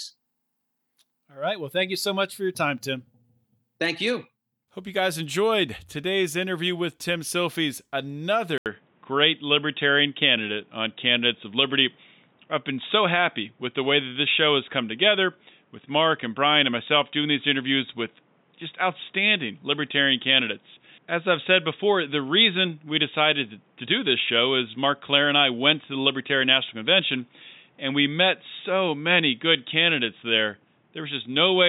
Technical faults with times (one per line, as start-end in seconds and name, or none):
8.58-31.69 input switched to a poorer device